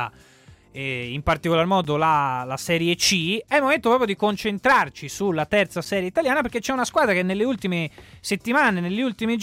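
At 1.84 s and 5.85 s, a gap between chunks drops in about 7 ms of hard-edged silence where consecutive 4-second chunks join, briefly interrupting the sound.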